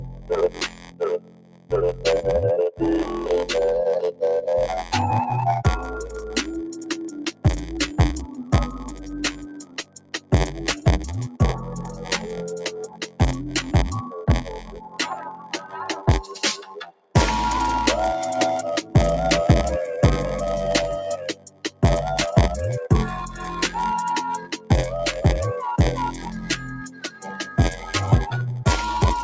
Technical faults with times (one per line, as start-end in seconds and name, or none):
0.00-29.23 block size mismatch (padded)
0.00-29.23 noise suppressor applied to music or sounds
0.00-2.04 sound cut by the noise suppressor
7.17-12.10 sound cut by the noise suppressor
12.87-17.15 sound cut by the noise suppressor
21.34-21.83 sound cut by the noise suppressor
24.40-24.70 sound cut by the noise suppressor
26.83-27.91 sound cut by the noise suppressor